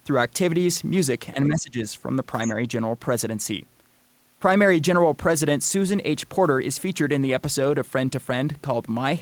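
Between 1.34 and 1.78 s the speech dips, by as much as about 20 dB, for roughly 300 ms in total. This is likely speech suppressed in double talk, with an echo canceller attenuating the near talker.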